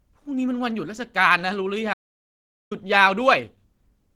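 From the first moment to the end, the speech carries plainly audible Opus compression. The voice sounds hoarse and muffled, with a grainy, rough texture rather than the swirling, watery holes that MP3 leaves. This fits the encoder working in its hybrid speech mode at a rate around 16 kbps. At that rate it likely rebuilt missing detail from folded or noise-filled bands rather than leaving them empty.

From 1.94 s to 2.71 s there is an audio dropout to silence, and about 0.78 s of the sound is lost. The speech stops abruptly mid-flow and resumes just as suddenly, and the gap between is silent with no room tone or hiss. That dead silence is what separates it from a quiet pause or a concealed packet loss, which would leave smeared or faded sound. The input was likely interrupted while recording carried on.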